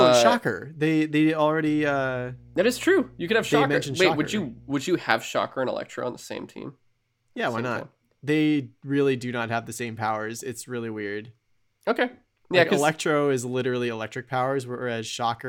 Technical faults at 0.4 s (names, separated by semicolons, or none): none